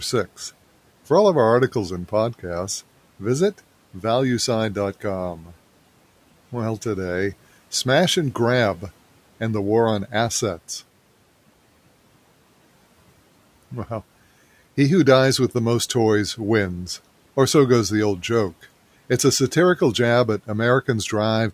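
At 5.37 to 5.5 s there's speech cut by the noise suppressor: it mistook a soft stretch of speech for background and pulled it down by about 7 dB, so for roughly a tenth of a second the sound goes swallowed and faint, dipping toward the room noise about 28 dB under it.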